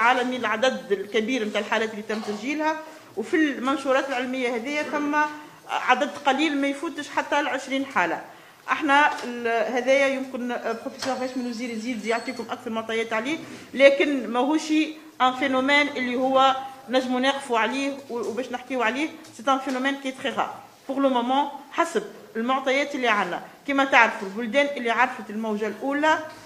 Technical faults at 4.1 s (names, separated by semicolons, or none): none